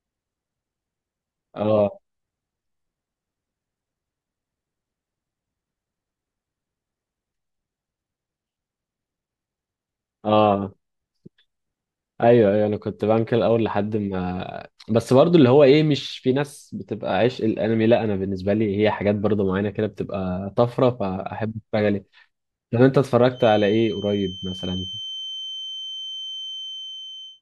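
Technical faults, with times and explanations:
23.31 to 27.42 s, feedback whistle: a thin 3.1 kHz tone sits about 15 dB under the speech to the end, swelling and fading slowly in level. This is likely a loudspeaker-to-microphone loop held just short of runaway, which explains why it never swells into a howl. That waver separates it from a fixed electrical tone.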